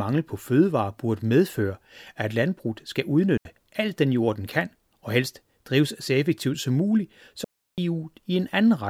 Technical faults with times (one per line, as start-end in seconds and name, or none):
3.37-3.45 digital wireless dropout
7.44-7.78 digital wireless dropout